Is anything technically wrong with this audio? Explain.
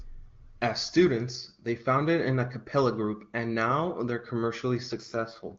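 Yes. From 4.92 to 5.58 s there is an AMR rate drop: the AMR-WB (HD Voice) link falls back to a lower mode, trading speech bits for error protection. The bandwidth stays the same and there is no gap, but the voice turns rough and synthetic, which fits a drop from 23.85 to about 8.85 kbit/s.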